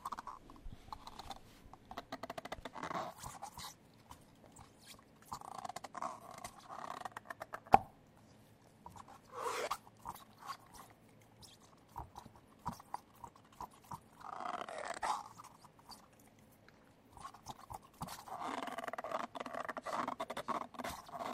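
No technical faults can be heard anywhere in this recording of sounds; the signal stays intact throughout.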